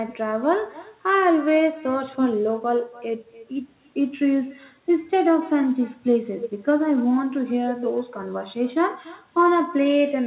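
From start to finish, the speech carries an echo with no canceller: the far end's loudspeaker feeds its microphone, returning each phrase roughly 300 ms later at about 21 dB down. On a spectrogram, every syllable has a faint, delayed ghost. The audio stops at 4 kHz, which fits G.711 A-law narrowband coding.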